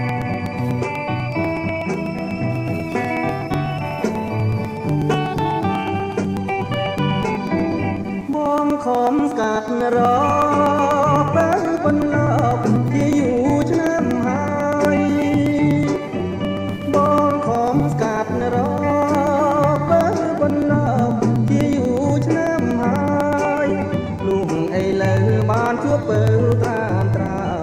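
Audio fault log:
0.09–27.51 s: periodic USB or driver dropouts. A run of regular ticks recurs every 0.123 s, roughly eight per second and around two hundred in all, each sounding only where signal is present. Something appears to stall the USB bus or audio driver at a fixed interval, and each stall skips about 2 ms of audio outright rather than filling it with silence. The waveform jumps across the gap, and that abrupt discontinuity is what produces each click.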